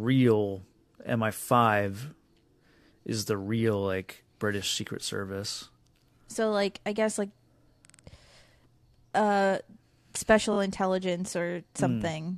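Repeated frames at 7.85 to 7.99 s and 10.52 to 10.57 s make this speech clip stutter. At 7.85 s a 46.4 ms block plays three extra times, which fits a pair of compressed frames being resent, adding 139 ms. At 10.52 s a 23.2 ms block, likely a single frame, plays twice more, adding 46 ms. The decoder replays identical data, so the same fragment recurs.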